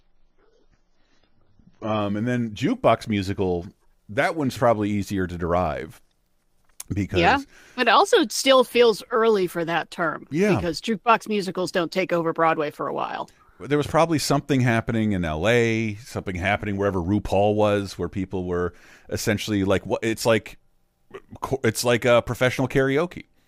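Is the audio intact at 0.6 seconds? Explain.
No. From 0.0 to 2.0 s the adaptive stream is starting at a low bitrate. Nothing is heard above 6.9 kHz, and codec artefacts are stronger, which fits about 16 kbit/s. Quality then jumps abruptly, without a gap, before "and then jukebox musical".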